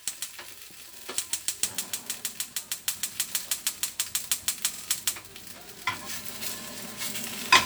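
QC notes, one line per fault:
0.98–1.07 s and 4.74–4.83 s, repeated buffer: at each point, a roughly 46 ms slice of sound plays three times in a row with a hard join between repeats, which fits a 2048-sample buffer being replayed twice while waiting for new audio. This produces a short stutter rather than a silent gap. The timeline simply stalls and resumes with no audio skipped, which sets it apart from a dropout.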